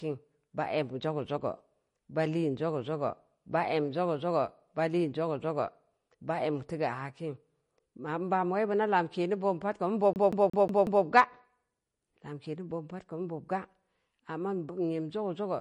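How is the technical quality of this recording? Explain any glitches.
The technical quality is poor, with audible compression damage throughout and a skipping stutter near the end.

Throughout, the speech sounds watery and swirly, likely from MP3 compression at a low bitrate around 40 kbps; the spectrogram shows a hard ceiling at 10.5 kHz and flickering holes.

From 10.13 to 11.05 s, a CD stuck on one turn repeats the same 0.18 s slice five times, producing a fast even stutter; the waveform shows identical blocks separated by brief mutes.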